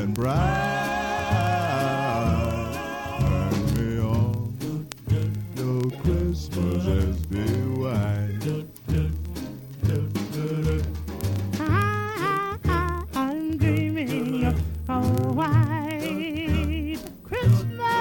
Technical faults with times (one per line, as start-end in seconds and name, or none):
0.13-17.98 word clock ticks